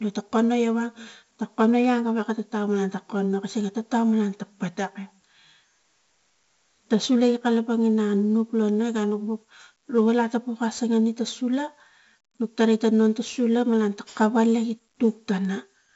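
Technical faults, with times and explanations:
Throughout, 4-bit ADPCM compression: heavy gritty hiss tracks every loud syllable, attacks smear, and nothing sits above 7.7 kHz, which fits a 64 kbps stream.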